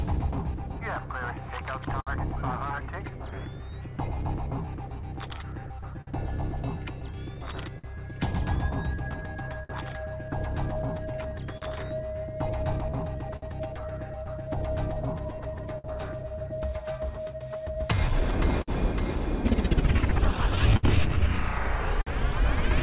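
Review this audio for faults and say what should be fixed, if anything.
Clock drift between sender and receiver: the sender's audio clock runs roughly 5% slow against the receiver's, so the jitter buffer keeps draining rather than holding steady. Through the whole clip this leaves the timing slightly unsettled, with small hiccups recurring at uneven intervals instead of a smooth, even flow. The band stops at 4 kHz, which fits the G.711 mu-law call path and is not a fault. Prevention: lock both ends to a common clock reference, or have the receiver resample continuously to track the sender's rate.

Repeated timing corrections: from 0.89 s to 21.98 s the receiver keeps stretching the audio to make up for the slow sender, playing it at about 98% speed and adding somewhere around 0.4 s in total. Because each stretch is small and the corrections are spaced irregularly, they come across as a faintly dragging, unsteady tempo rather than as distinct glitches. 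Prevention: use smooth adaptive resampling instead of discrete stretch-and-repeat edits, so the rate adjustment stays inaudible.

Scattered short gaps: packets are lost or arrive late at isolated points, and the receiver fills each hole by extending the last sound. This happens about ten times between 1.63 s and 7.86 s, about five times between 9.63 s and 13.44 s, and about fifteen times between 15.36 s and 22.08 s. The longest patches are around 70 ms. Each one is heard as a brief tick, smear or stutter in otherwise clear audio. Prevention: correct the drift so the buffer stays filled, and give it enough target depth to absorb late packets.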